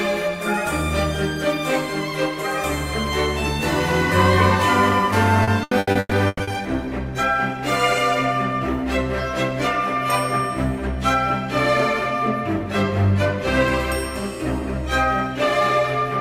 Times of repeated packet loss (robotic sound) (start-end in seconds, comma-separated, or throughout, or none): 5.43-6.50